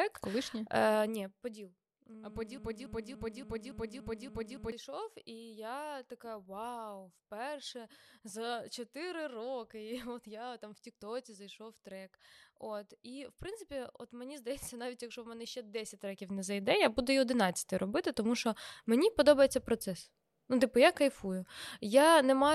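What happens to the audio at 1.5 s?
At 1.5 s the speech is inside a stretch of zipper noise running from 0.92 to 1.61 s. The level drops by roughly 15 dB in unsmoothed 2 dB steps, about fifteen per second, and each step clicks, producing an audible ticking as the level falls.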